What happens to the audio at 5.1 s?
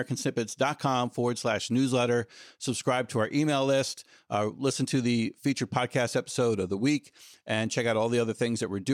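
At 5.1 s the speech plays through intact, with no dropout, click, distortion or other fault at that moment.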